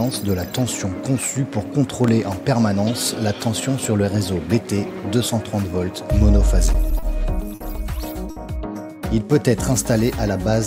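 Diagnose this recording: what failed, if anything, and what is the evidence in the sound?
Loud pop, analogue stage: two sharp pulses at 2.04–2.11 s, about 10 dB above the signal, likely a voltage step from a plug or switch.

Network: short stalls from late packets at 6.99, 7.55 and 8.30 s. The emptied jitter buffer holds the sound for 30, 50 and 60 ms, with nothing lost.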